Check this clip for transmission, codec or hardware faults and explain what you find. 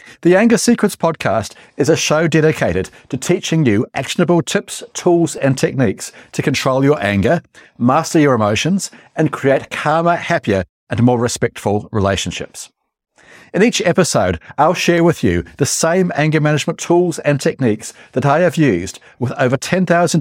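There is one fault, a short run of CD scratch ticks. From 4.95 to 5.59 s, four ticks occur at roughly six per second, the longest lasting around two milliseconds. A scratch on the disc spoils more data on each rotation than error correction can restore, so the player interpolates or mutes those samples. In the speech this is heard as evenly spaced clicks or tiny gaps, recurring at the disc's rotation rate.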